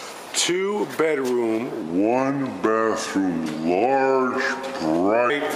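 From 1.82 to 5.30 s, a section at the wrong speed plays at 0.792 times normal, dropping pitch about four semitones; likely a clock mismatch, sounding deep and slow.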